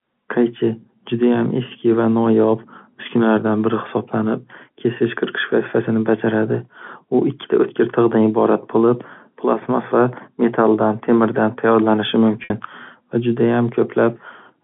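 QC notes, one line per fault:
12.44 to 12.50 s, packet loss with pitch repetition: about 60 ms dropped after "va metaldan temirdan tayyorlanishi", bridged by a repeated pitch period. This gives a brief held buzz, unlike a hard dropout's silent click.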